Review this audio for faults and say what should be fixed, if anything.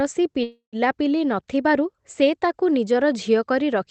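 From 0.43 to 0.76 s the speech stalls into a fading buzz that drops to silence before resuming exactly where it stopped, with nothing lost. This is a call audio freeze, likely caused by delayed packets emptying the jitter buffer, adding about 0.29 s of delay. A deeper or more adaptive jitter buffer on the receiving end would help prevent this.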